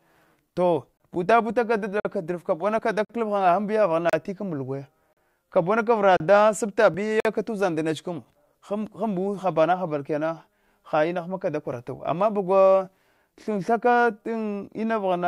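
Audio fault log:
0.97 to 7.20 s, gap between stream segments: Silent holes with hard edges begin at 0.97, 2.00, 3.05, 4.10, 5.13, 6.17 and 7.20 s and last 26 to 50 ms. They recur about once per second, which fits 1-second stream segments whose time stamps leave gaps the player fills with silence. The speech then resumes intact.
2.79, 6.94 and 9.35 s, dropped buffer (overrun): Each is a small forward jump in the speech, losing around 15, 10 and 5 ms. There is no silence. The likely cause is samples overwritten before the program read them, so the surrounding audio is spliced directly together.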